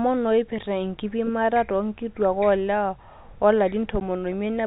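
At 4.0 s a brief hole of about 10 ms cuts into the speech, with hard edges. This is packet loss filled with silence: the gap fits one lost 10 ms packet, replaced by silence rather than concealed, over the band-limited G.711 telephone path.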